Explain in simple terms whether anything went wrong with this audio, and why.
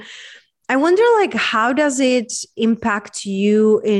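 Listening to the recording, nothing stood out as having gone wrong with the sound at any point.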